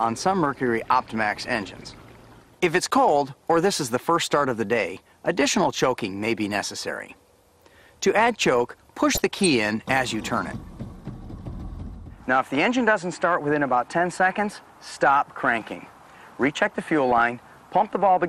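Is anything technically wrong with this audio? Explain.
Yes. Throughout, the sound is dull, with gurgling, granular distortion. This is likely MP2 compression at a low bitrate, around 80 kbps, switching off upper sub-bands and coarsely quantising the rest. DAB burbling occurs from 9.13 to 9.46 s and again from 17.10 to 17.21 s. Bit errors, roughly 0.5 and 0.3 percent, slip past error correction and corrupt sub-band data, causing watery, bubbling blips.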